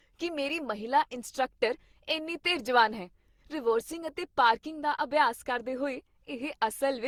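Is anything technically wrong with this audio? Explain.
Yes. Throughout the speech, the signal has likely been through repeated lossy encoding, an Opus chain run about seven times over, which fits a rate near 64 kbit/s. This is generation loss. Every decode and re-encode quantises again on a shifted frame grid, so noise piles up with each pass. The speech comes out swirly, smeared and hollow beyond what that rate alone would cause, with blurred attacks, even though content reaches up to 20.2 kHz.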